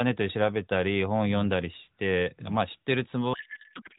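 From 3.34 s to the end, the speech collapses into garbled noise and warble that barely tracks it: a codec payload misread. Octet-aligned AMR frames are being parsed as bandwidth-efficient, shifting every field. Before that, the AMR-NB path sounds band-limited to 4 kHz with light coding damage, consistent with 12.2 kbps.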